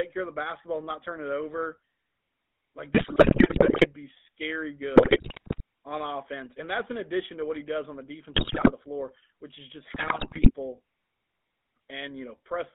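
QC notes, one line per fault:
throughout, GSM full-rate codec: a buzzy, gravelly roughness from pulse-driven vocal-tract modelling, with the band held to about 200 Hz–3.6 kHz, which fits a 13 kbps stream.
2.94–3.88 s, 4.96–5.61 s (between "be scary" and "on offense"), 8.34–8.72 s (between "he does on the" and "the floor which is"), 9.94–10.51 s (after "floor which is just"), GSM bit errors: corrupted filter, pitch and gain values bend the spectrum and level frame by frame, so the sound breaks into squawks, pops and gargling.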